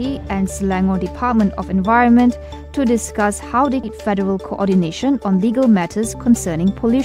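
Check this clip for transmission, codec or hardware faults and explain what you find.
Two transmission faults appear, both in the second half.

At 3.83 to 3.85 s, a skip ahead: about a second of audio was dropped on the way or discarded by an overflowing jitter buffer, so playback jumps forward with no gap.

From 3.93 to 7.02 s, a jitter buffer speed-up: the overfull buffer trimmed pitch-period slices repeatedly, shedding roughly a third of a second. The sound runs about 109% speed at unchanged pitch and feels hurried.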